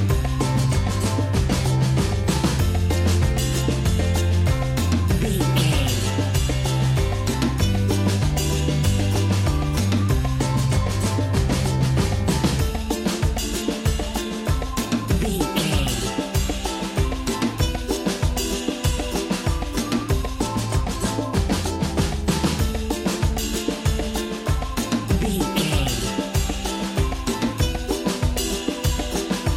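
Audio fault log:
21.34 s, corrupt FLAC frame: a brief error cuts into the sound, peaking at about -17 dBFS and lasting only a few milliseconds. Flipped bits in the compressed data went unchecked. The decoder's prediction then ran on wrong values and produced garbage samples in place of the real signal. The damage stays short, which points to a single bad frame. At the next intact frame, decoding picks up cleanly.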